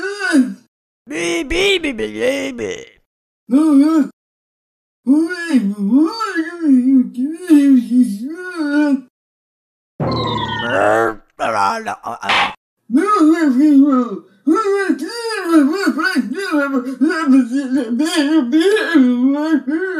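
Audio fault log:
No faults can be heard anywhere in this audio. There is nothing here to log.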